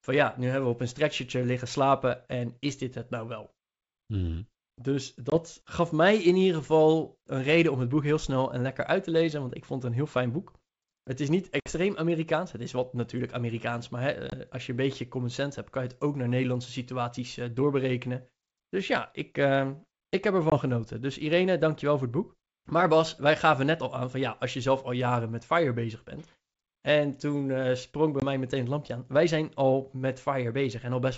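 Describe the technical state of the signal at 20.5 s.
Packet loss on an ADPCM call, 20.50 to 20.56 s: a 20 ms silent hole, about one packet, left the decoder's predictor out of step, so speech returns slightly distorted before settling. That disturbance after the gap sets it apart from a clean dropout.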